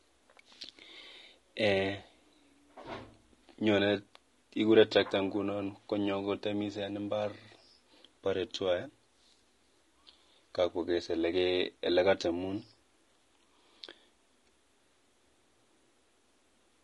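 From the first second to the end, the speech carries plainly audible low-delay AAC compression damage, likely from AAC-ELD, the kind used on video calls. Its short frames can't separate the pitch harmonics cleanly, and at a rate that fits something around 32 kbps there aren't enough bits to cover that. So the voice comes across rough and grainy, with noise filling the gaps between harmonics and a top band that sounds thin and synthetic.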